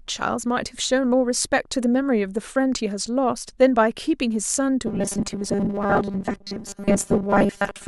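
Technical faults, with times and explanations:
4.87 to 7.87 s, robotic sound from repeated short buffers: new audio likely arrived too seldom, so playback looped a tiny stretch, which fits a 5 ms buffer, while most real speech was skipped. The loop forces a rigid, metallic 200 Hz buzz until the end.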